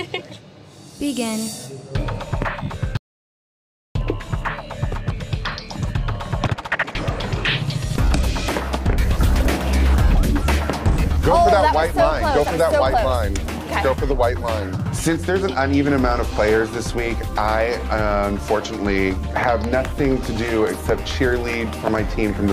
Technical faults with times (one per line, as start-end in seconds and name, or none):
2.97-3.95 audio dropout to silence